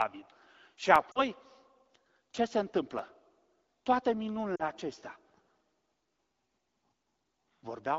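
Blocks of digital silence hit this speech recording at 0.95 s and 2.99 s. Each time the signal drops out for about 2.7 ms with no fade, so each is heard as a tick or dip, and the short hole fits an unfilled 128-sample output buffer. Lost AMR speech frames occur at 1.11 to 1.20 s and 4.55 to 4.63 s. Each gap is about 40 ms, consistent with two 20 ms frames, during which the decoder repeats the last good pitch and vocal tract settings with falling gain. The result is a brief fade toward near silence before the speech returns weak or rough for a moment, carried over the light coding texture of AMR wideband (HD Voice) at 12.65 kbit/s.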